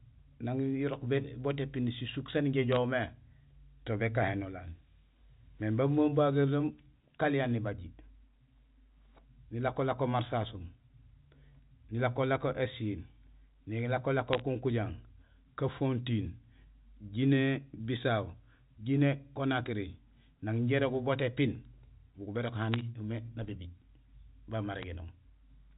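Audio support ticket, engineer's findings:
Bit errors on a digital phone line: short bursts of sharp ticks and crackle at 2.72–2.76 s (after "épini sisuk saan injé"), 14.28–14.42 s, 22.74–22.81 s (after "bugul bérok") and 24.74–24.84 s. The A-law G.711 path carries them. Flipped bits, roughly a fraction of a percent, alter single samples. Waveform shows isolated spikes; spectrogram shows thin full-band vertical lines up to the 4 kHz ceiling.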